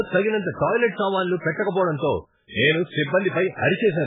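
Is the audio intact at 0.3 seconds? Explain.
No. At 0.3 s, like the rest of the clip, the speech shows heavy MP3 compression damage, likely from a very low bitrate around 8 kbps. Everything above 3.8 kHz is cut away, and weak frequency lines flicker between frames, giving a muffled, watery, swirly sound with smeared attacks.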